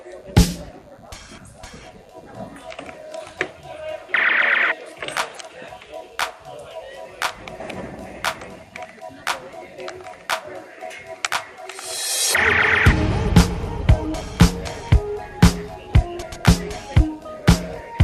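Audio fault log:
Throughout: DECT cordless phone buzz, a thin, steady rasp roughly 35 dB below the sound. A nearby DECT handset or base sends radio bursts every 10 ms, and the audio circuit rectifies them into a 100 Hz buzz with dense harmonics. Mains hum sounds smoother and rounder.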